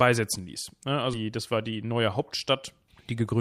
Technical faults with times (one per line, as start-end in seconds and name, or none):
1.13-1.15 skip ahead
1.23-3.34 jitter buffer speed-up